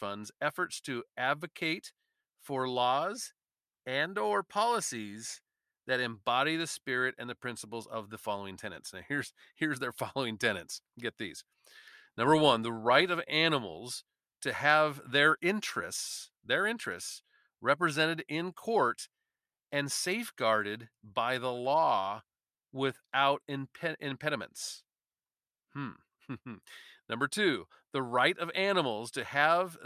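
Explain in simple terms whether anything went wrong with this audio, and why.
Listening to the speech recording, nothing stood out as having gone wrong anywhere in it.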